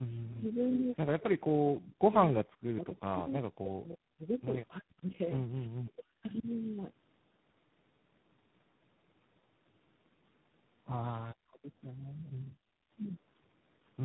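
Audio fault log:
Throughout, tandem speech coding: speech passed through three speech coders in a row, ending in G.726, so each re-encoded the last one's damage. It sounds rough, muffled and warbly, with nothing above 3.9 kHz.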